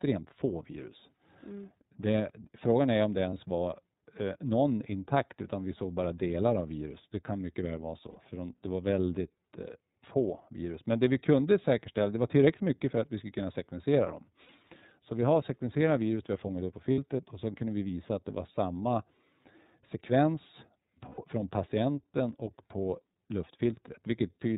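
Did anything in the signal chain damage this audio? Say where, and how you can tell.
Yes. At the codec stage, iLBC coding makes the speech rough and synthetic throughout; a spectrogram shows a hard ceiling at 4 kHz, as expected of a narrowband codec, here in its 30 ms-frame mode.

At the network stage, lost iLBC frames at 3.3 s (30 ms), 8.1, 14.42, 16.92 (60 ms each) and 21.09 s (90 ms) become held buzzy vowels. These show as frozen, repeating harmonic stripes fading out, with clean recovery right after.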